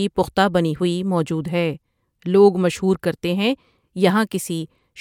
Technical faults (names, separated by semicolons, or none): none